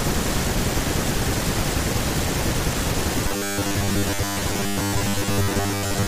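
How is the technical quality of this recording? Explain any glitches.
The recording has one clear glitch. From 3.22 s to the end, new audio is likely arriving too seldom, so short buffers repeat for most of that stretch, producing robotic sound: a rigid 100 Hz metallic buzz over the speech, which fits 10 ms repeats.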